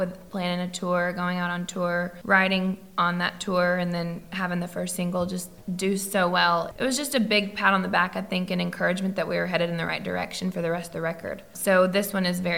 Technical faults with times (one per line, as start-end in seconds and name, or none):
none